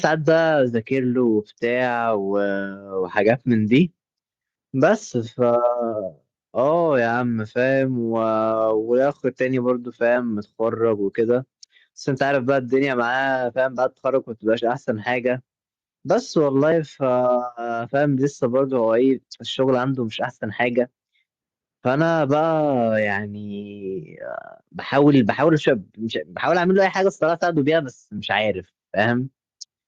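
No technical faults can be heard anywhere in the recording; the signal stays continuous and steady throughout.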